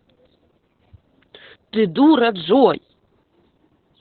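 From start to finish the speech carries heavy Opus voice compression: nothing above about 4.3 kHz, a muffled, hoarse, faintly robotic tone. That points to a narrowband SILK mode at a very low bitrate, around 8 kbps, where the excitation is coded coarsely.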